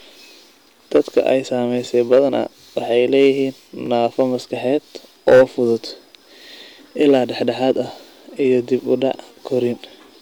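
Hard clipping at 0.96–1.29, 2.12–2.19, 2.98–3.29, 4.04–4.22, 5.28–5.43 and 7.01–7.71 s (before "ah iyo dib u") overdrives peaks by about 2 to 8 dB. The flattened waveform tops cause crackle on the speech peaks and show as vertical harmonic smears on a spectrogram. Overlapping chunks at 1.85, 3.86, 5.88, 7.89 (before "iyo dib u dhac") and 9.90 s replay 13 ms at each 2 s chunk join, heard as regular clicks and seen as a waveform discontinuity.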